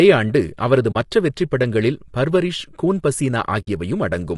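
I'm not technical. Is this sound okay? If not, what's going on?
No. Throughout the clip the speech has a rough, grainy texture, with a hiss between the tones of the voice and a top end that sounds dull or artificial. That is most likely low-delay AAC compression, the kind used for video calls. To keep delay down it processes sound in very short slices, which captures the detail of a voice poorly, and here it was given too little data to work with.

There are also two brief holes where the sound fades out and back in: from 0.91 to 0.96 s and from 3.61 to 3.68 s. This is AAC frame loss with muting. Small chunks of the audio stream never arrived, and the player replaced them with silence, blending the edges so the gap is soft. The lengths fit two and three missing chunks.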